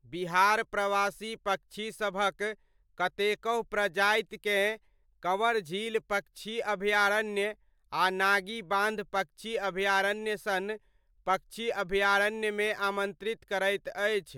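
No dropouts, clicks, distortion or timing faults turn up anywhere in this speech recording.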